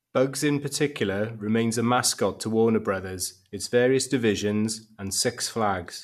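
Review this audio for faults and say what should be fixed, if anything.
No faults turn up in this audio, so nothing should be fixed.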